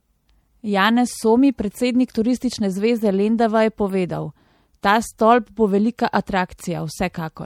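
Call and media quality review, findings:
Watery, swirly texture through the whole clip, sibilants metallic, consonant attacks smeared; nothing above 19.8 kHz. Likely MP3 compression at a bitrate consistent with 64 kbps. The encoder runs short of bits, drops weak frequency lines that flicker frame to frame, and caps the treble.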